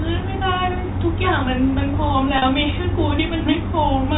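At 2.38 s, packet loss with pitch repetition leaves a 40 ms gap, which fits two 20 ms packets, bridged by repeating the last pitch period. It sounds like a brief held, buzzy tone. A spectrogram shows frozen harmonics, and the waveform shows identical repeating cycles, all within the 4 kHz telephone band.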